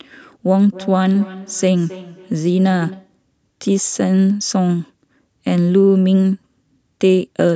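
From 0.7 to 3.2 s, feedback echo between two devices: another device's playback is recaptured, so speech repeats roughly every 0.3 s.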